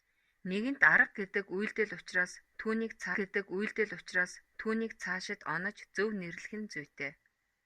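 At 3.14 s a stream segment is repeated: the player queued the same two seconds of speech twice, so the passage up to 5.14 s replays. A small blip marks the jump back, seen as a waveform discontinuity and an identical spectrogram pattern appearing twice.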